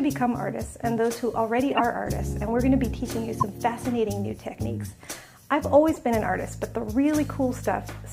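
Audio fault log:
1.71–1.81 s, 3.40–3.43 s and 5.94–6.00 s, corrupt frame decoded: three short glitches where damaged compressed data got played anyway, so misread gains and codes threw energy into the wrong frequencies for two or three frames each time. The first two hit fairly hard, peaking around -10 dBFS, while the last is much softer at roughly -25 dBFS.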